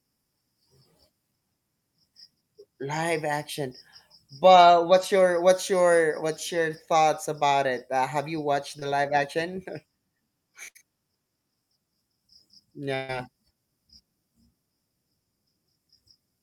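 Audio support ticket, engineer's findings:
Short concealed packet loss, 8.79–8.83 s, between "have you watched" and "live action": brief smear as receiver concealment extends the prior sound across about a 20 ms gap.

Burst of packet loss, 10.69–10.77 s and 12.95–13.10 s: receiver-side concealment holds, then fades, the last sound for about 60 ms and 140 ms. Audio resumes with those stretches missing.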